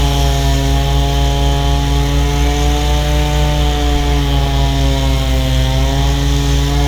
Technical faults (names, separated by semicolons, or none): none